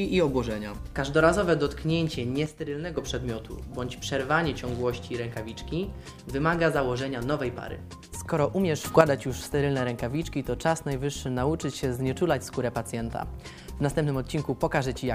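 At 2.46 s the level drops by about 8 dB until 2.97 s, and at 8.85 s it rises by about 8 dB until 9.01 s, noise floor included. These sudden gain jumps show as vertical steps in the waveform envelope and in spectrogram brightness, likely from unramped gain changes.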